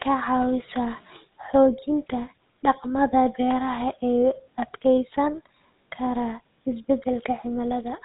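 A buzzy, gravelly roughness runs through this speech from start to finish, with a dull, boxed-in tone because nothing above 4 kHz survives. That is the signature of the GSM full-rate codec, the original mobile phone coder, here at 13 kbps. It models the vocal tract and excites it with a regular pulse train built from only every third sample, so the fine detail of the voice is replaced by that coarse, grainy buzz.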